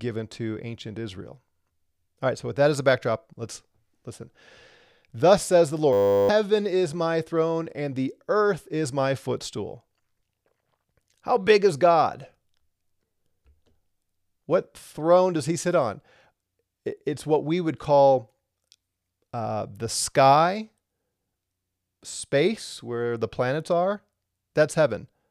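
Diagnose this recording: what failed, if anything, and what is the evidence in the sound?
A system hang loop at the driver or buffer stage runs from 5.93 to 6.29 s, after "says the" and before "is my throne and". A 10 ms fragment repeats as a steady 100 Hz buzz while the hardware cycles one buffer, and roughly 0.4 s of speech is lost.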